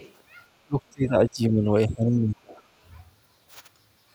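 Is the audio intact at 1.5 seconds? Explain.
No, speech suppressed in double talk from 0.65 to 2.59 s, likely an echo canceller ducking both talkers. The waveform shrinks sharply and the spectrogram's upper bands fade or break apart.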